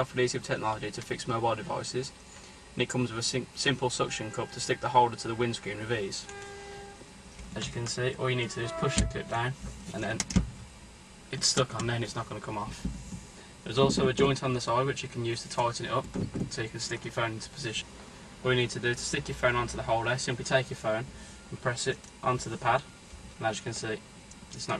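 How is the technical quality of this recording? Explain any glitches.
Nothing in this recording stands out as a glitch; it sounds fine all the way along.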